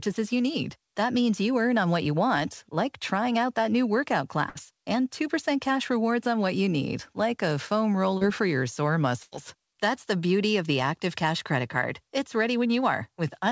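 At 4.49 to 4.58 s, just after "out that new workout", a burst of packet loss removes about 60 ms. The receiver continues the last sound and fades it before the speech resumes further on. On a spectrogram, the final sound smears flat and dim. On the waveform, the envelope decays smoothly.

At 8.18 to 8.24 s, between "need like a foam" and "for your sore", a short concealed packet loss drops about 30 ms. It is patched by continuing the last sound and heard as a brief wobble. The spectrogram shows a slight blur, with no visible gap.

At 9.23 to 9.34 s, after "for your sore", a second burst loses about 90 ms. The longer held sound fades before the jump. It shows as frozen, dimming bands and a tapering waveform. Throughout, the G.722 call path leaves nothing above 8 kHz.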